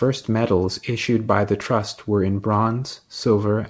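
No technical faults can be heard in this speech clip. It comes through a WebRTC call path whose band stops at 8 kHz, which fits the G.722 codec at 64 kbps.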